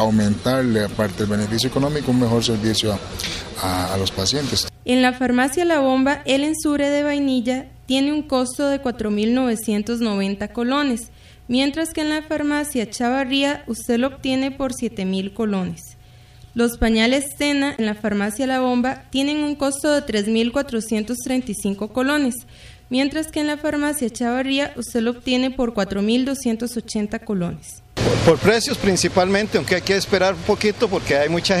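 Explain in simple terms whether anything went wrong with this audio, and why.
Something did go wrong, just once and very briefly: from about 17.75 to 17.79 s there's a short glitchy blip. That's damaged data in a compressed stream. A small piece of the compressed file got scrambled or lost, so the decoder couldn't make sense of those bytes, lost its place, and had to hunt for the next clean starting point. That brief stumble is the glitch you hear.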